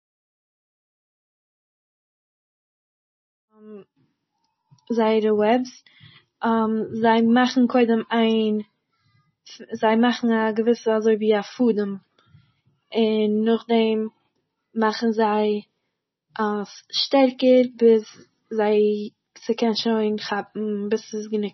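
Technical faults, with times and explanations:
Throughout, MP3 compression: the speech stops sharply at 5.9 kHz and sounds watery and swirly, with smeared consonant attacks, likely from heavy encoding at a rate that fits about 24 kbps. A spectrogram shows a flat ceiling with flickering holes beneath it.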